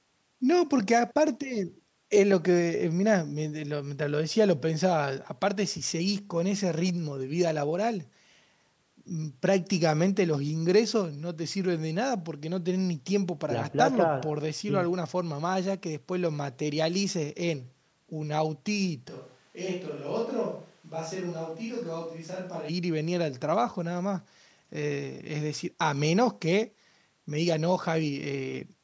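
From 19.11 s to 22.68 s the speech abruptly turns roomy and hollow, thinner in the bass and roughly 5 dB quieter, with background noise rising to around 30 dB below the speech, then snaps back just as suddenly. This is likely a switch to a distant microphone after the close one dropped out. The waveform envelope shrinks and its pauses fill with noise; the spectrogram shows smeared reverberant tails and weaker low end, under the call processing's 8 kHz ceiling.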